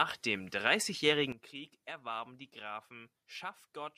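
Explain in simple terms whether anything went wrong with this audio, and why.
Yes, something did. At 1.32 s there's a sudden gain jump: the speech and the background noise both drop sharply together, staying much quieter until the end. Likely a volume setting got applied instantly instead of being faded in smoothly.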